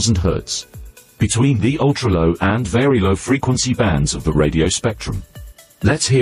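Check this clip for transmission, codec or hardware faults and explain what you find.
No transmission, codec or hardware faults can be heard here.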